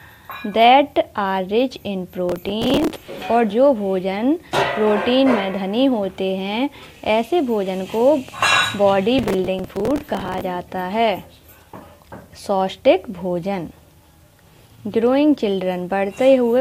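Two bursts of processor overload crackle, 2.29–3.22 s and 9.19–10.41 s: missed deadlines on roughly 5 ms buffers replay stale audio with hard edges, producing gritty tearing.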